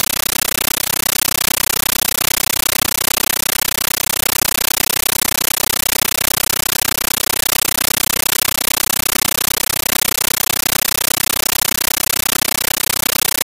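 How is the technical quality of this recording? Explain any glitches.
The technical quality is very poor. A compressed stream is played as audio for the whole clip, so the intended sound is replaced entirely. Undecoded Dolby Digital data is being treated as ordinary samples. Each frame comes out as a burst of noise about 13.3 ms long, then silence from the zero padding. The bursts repeat 31.25 times a second. The result is very loud, harsh, chattering static. The pattern fits a 640 kbps AC-3 stream.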